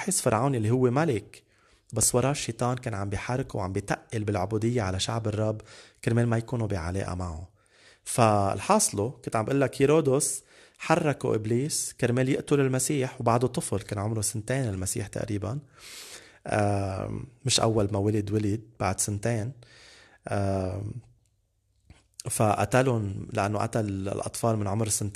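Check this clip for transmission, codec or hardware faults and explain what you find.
There's one fault here, a single loud pop at 2.03 to 2.06 s. It's a sharp click that peaks a few decibels above the speech, and the talking carries straight on underneath it. The likely cause is a sudden voltage spike, from something like a plug, a switch, a static discharge or a driver glitch, landing on the signal. The circuitry downstream then shapes that spike into a brief thump.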